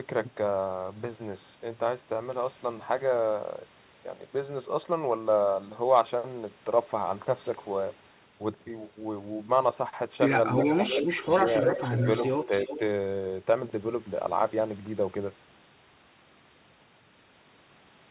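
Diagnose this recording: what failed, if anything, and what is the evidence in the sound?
Echo leak in the call processing, likely from a loudspeaker end whose echo canceller let its pickup through. A delayed copy of the speech returns about 340 ms late at 10.57–11.06 s, 11.28–12.07 s and 12.28–12.79 s, strong at first and fainter in the last. The fixed lag, repeating rather than smearing, separates it from room reverberation.

Speech suppressed in double talk, also likely in the call processing, from 10.95 to 11.27 s, overlapping the first echo. The level dips in pieces, about 5 dB at most, over roughly a fifth of a second. Its shallow, partial drops distinguish it from a network dropout's abrupt silence.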